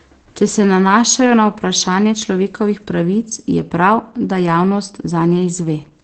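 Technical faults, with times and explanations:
Throughout, Opus voice compression: coarse SILK coding, consistent with roughly 12 kbps, leaves speech muffled and hoarse; the spectrogram shows nothing above 8.7 kHz and smeared harmonics.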